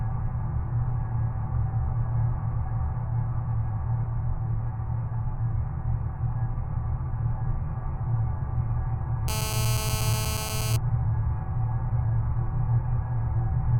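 From 9.28 s to 10.76 s a GSM phone buzz sits under the sound at about 6 dB below it. A nearby 2G handset in a call pulses its transmitter about 217 times a second, and the audio circuitry rectifies those bursts into a raspy, harmonic-rich buzz unrelated to the sound.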